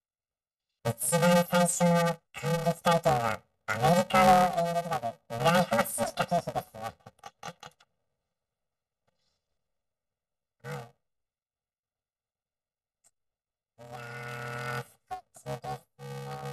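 Throughout, planar audio read as interleaved turns 2.9 ms blocks into a robotic 345 Hz buzz. Unlike pitch-shifting faults, it brings no clear octave rise.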